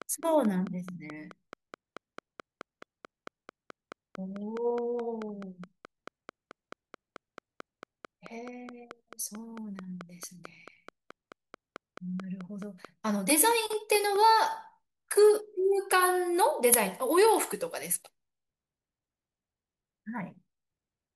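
From 0.02 s to 14.2 s a train of clicks runs under the speech: sharp, near-identical ticks at a steady 4.6 per second, about seventy in all, peaking a few decibels above the speech and audible in the pauses as well. The cause is likely electrical interference or a faulty connection or power supply. On a spectrogram they show as thin, evenly spaced vertical lines spanning the full frequency range; on the waveform, as narrow regular spikes.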